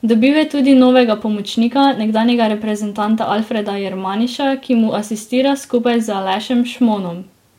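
Throughout the speech, a block size mismatch (truncated) discards each block's tail, causing a 100 Hz buzz; pace and pitch stay essentially normal.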